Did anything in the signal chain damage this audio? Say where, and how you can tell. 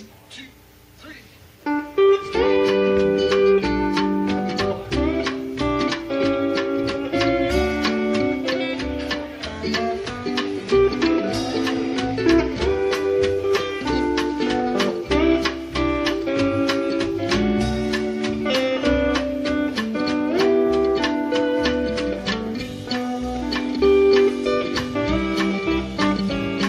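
No, nothing in the signal chain damaged this audio.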